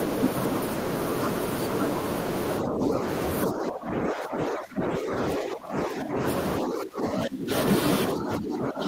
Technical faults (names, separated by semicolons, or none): speech suppressed in double talk